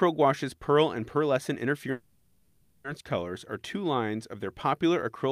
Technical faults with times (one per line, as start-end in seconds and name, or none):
1.91-2.86 call audio freeze